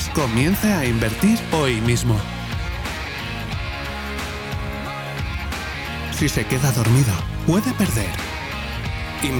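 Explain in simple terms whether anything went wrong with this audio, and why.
Word clock ticks run from 0.14 s to 8.98 s: two digital devices run on slightly mismatched clocks, so a sample slips about every half second, making sharp ticks.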